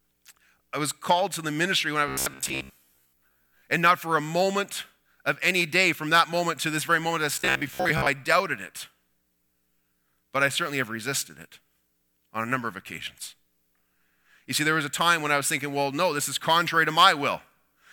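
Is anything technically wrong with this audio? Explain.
Yes. From 2.08 to 3.63 s and again from 7.36 to 8.08 s, the speech turns into robotic sound from repeated short buffers: a rigid metallic buzz fixed at 66.8 Hz. This is likely a short stretch, around 15 ms, being looped while fresh audio is late. Most of the first span is repeated, and about half of the second.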